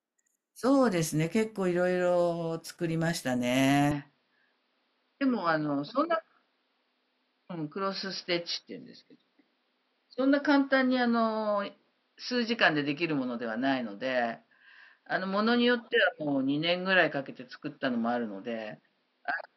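Input switched to a poorer device at 3.91 s, lasting to the end: the speech abruptly loses everything above 5.6 kHz and turns duller, with no gap and no level jump, and a faint new noise floor appears well below the voice. This is likely a change of microphone mid-recording.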